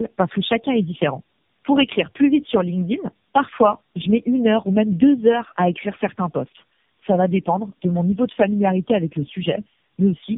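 From start to end the speech shows tandem speech coding: it sounds like three passes through a narrowband speech codec, which fits repeated AMR-NB coding, each pass working on the previous pass's degraded output. Nothing is heard above 3.8 kHz, and the voice comes through rough, muffled and warbly.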